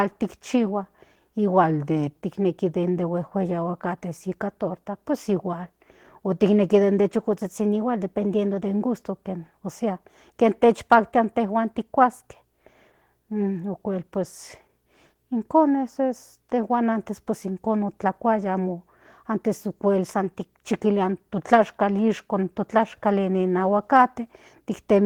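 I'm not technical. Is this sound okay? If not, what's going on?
No. Two separate problems can be heard.

Opus voice compression runs through the whole clip. The speech was squeezed into a very small amount of data by a voice coder that rebuilds the voice from a rough model and codes the higher frequencies separately and coarsely. At this tight setting the damage is plainly audible: the speech sounds muffled, a little hoarse, and slightly robotic from start to finish.

A drift correction step is heard three times, where playback briefly changes speed and pitch together and then snaps back. From 1.6 to 2.2 s the sound runs about 6% slow and drops roughly a semitone. From 7.4 to 8.7 s and from 20.1 to 20.8 s it runs about 6% fast and rises roughly a semitone. This is likely software keeping two clocks in step by abruptly nudging the playback rate.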